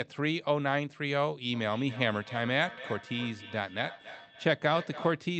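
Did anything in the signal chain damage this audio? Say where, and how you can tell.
Yes. Feedback echo between two devices from 1.53 to 5.28 s: speech returns roughly every 300 ms, about 15 dB down, as one microphone recaptures another device's playback.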